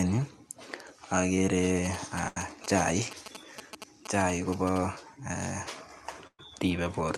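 From 1.85 to 4.78 s, GSM signalling bursts intrude. A nearby 2G phone is exchanging short radio bursts, and the audio circuit rectifies them. The result is a galloping dit-dit-dit of brief 217 Hz buzzes, about 10 dB below the speech.

At 2.28 s comes a burst of packet loss lasting until 2.37 s. About 80 ms of speech never arrived. The receiver stretched the last sound for 76 ms, fading it out, then jumped ahead. At 6.27 to 6.40 s, a second loss removes 110 ms. The concealment fades away and leaves about 50 ms of silence before the speech resumes.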